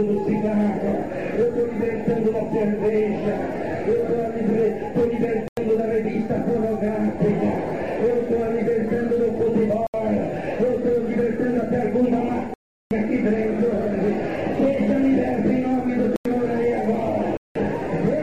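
Blocks of digital silence at 5.48, 9.87, 12.54, 16.16 and 17.37 s (93, 72, 372, 93, 186 ms): likely unfilled output buffers, the sound cut out abruptly, leaving short holes.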